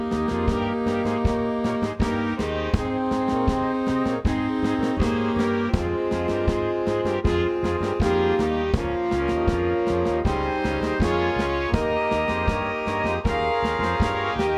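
No technical faults are audible.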